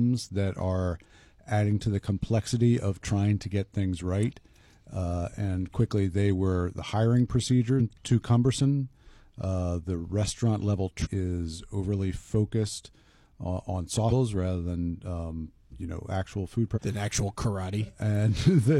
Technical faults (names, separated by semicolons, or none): compressed frames skipped